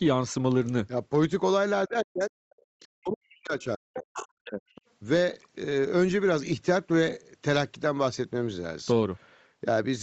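It's a speech clip, and the talker drops out twice, from 1.88 to 2.31 s and again from 2.95 to 4.67 s, sinking to near silence in patches. That's likely speech suppressed in double talk, with the echo canceller ducking everything while the far end spoke. Between those, from 2.53 to 2.67 s, the room tone dips by about 26 dB, which is background gated by the echo canceller clamping the mic while the loudspeaker played. You'll also catch faint stray bits of another voice at 2.80–2.88 s and 4.75–4.81 s, plus a much more noticeable stretch from 3.94 to 4.28 s, probably the other side's voice leaking through because the canceller didn't fully strip the loudspeaker out of the mic. The whole thing tops out at 8 kHz, which fits the call's normal mic chain.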